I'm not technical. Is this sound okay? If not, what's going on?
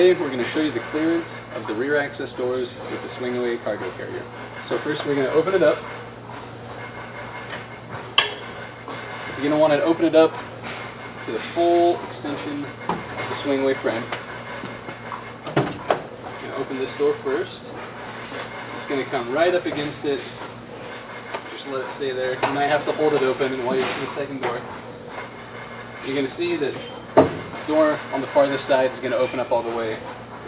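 Yes, nothing is wrong here.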